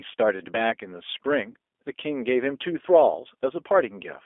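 From the start, the speech carries the G.729 codec sound. Everything sits in a narrow 300 Hz to 3.5 kHz phone band, and the plainly audible roughness and slightly synthetic edge come from the voice being rebuilt from a filter, pitch predictor and a few pulses, which fits 8 kbit/s G.729A.

At 1.50 to 1.54 s there's VoIP packet loss concealed by the speech codec. About 40 ms went missing, which fits two 20 ms packets. The decoder stretched its last pitch and filter into a brief fading sound, and the voice stays weak or distorted just after.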